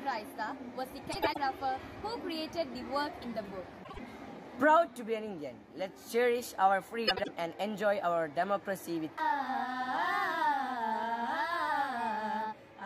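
Three brief spots of frames out of order, at 1.12–1.38 s, 3.83–3.99 s and 7.07–7.28 s. Each time, two adjacent blocks (about 104, 52 and 78 ms long) play swapped, giving a garbled flutter, but no time is lost.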